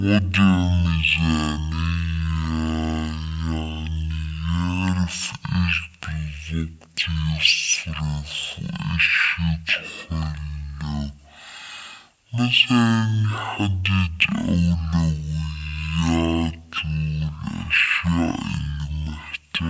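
From start to finish the speech sounds drastically slowed and deep, running at 0.363 times normal speed and pitched down by 17.6 semitones. It's a wrong sample rate fault, which fits 44.1 kHz audio being played at 16 kHz without conversion.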